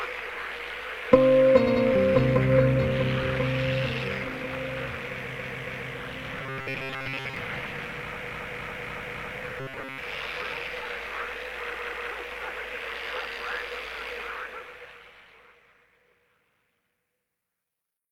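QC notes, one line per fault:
1.63–1.81 s, 5.34–5.90 s, 8.22–9.34 s, 11.71–12.08 s, repeated frames: the sound stutters, replaying the same short stretch. At 1.63 s a 92.9 ms block plays twice more (185.8 ms added). At 5.34 s and 8.22 s a 278.6 ms block repeats two and four extra times (557.3 ms and 1114.6 ms added). At 11.71 s a 185.8 ms block plays twice more (371.5 ms). The block lengths fit runs of two to six compressed frames re-sent, which lengthens the clip.
6.39–7.37 s and 9.60–9.98 s, robotic sound from repeated short buffers: the sound turns into a rigid, metallic buzz locked at 134 Hz while loosely keeping its original shape. The likely cause is playback starved of new data, looping the last buffer of roughly 7.5 ms to fill the gap. That loop length fixes the buzz pitch, and most of the real audio in these spans is skipped rather than heard.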